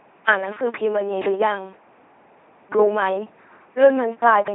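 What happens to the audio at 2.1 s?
The speech at 2.1 s, as throughout the clip, has passed through an LPC-10 vocoder, which sounds consistent with a rate near 2.4 kbit/s. Each instant is rebuilt from a short all-pole filter excited by either a pulse train or noise, so the speech comes out buzzy and robotic, with nothing above 3.8 kHz.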